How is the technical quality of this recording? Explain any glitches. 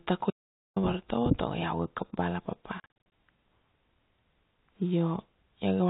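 The recording has two clear interruptions in the speech, both of them holes of dead silence. The telephone-band sound, with nothing above 4 kHz, comes from the G.711 A-law coding and is expected rather than a fault.

From 0.30 to 0.76 s there is an audio dropout to silence. The speech stops abruptly and about 0.46 s passes in silence, with no room tone at all, before it resumes on "vartovo tago iau ga". Whatever was said in that gap is lost. The silent gap most likely means the input signal was briefly lost, through a disconnection or mute, while recording carried on writing silence.

Between 2.80 and 3.12 s, just after "iau ga kap bala", the speech breaks up into a stutter of short hard-edged gaps. This is packet loss filled with silence. About 200 ms of audio is missing, scattered across roughly 320 ms, with no single hole longer than 40 ms. Those lengths fit 20 ms packets being dropped in transit, with the receiver playing silence in their place.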